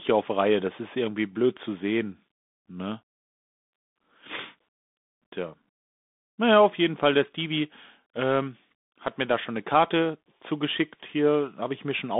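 From start to finish the speech passes through a Bluetooth CVSD headset codec, the narrowband link that sends one bit per sample saying only whether the signal rises or falls, with an adapting step size. Its damage is plainly audible: s sounds turn scratchy, loud bright moments smear where the step cannot keep up, and a grainy hiss sits beneath everything, which fits a 64 kbps CVSD stream. A spectrogram shows energy confined to roughly 200 Hz to 3.6 kHz and a hard ceiling near 3.8 kHz.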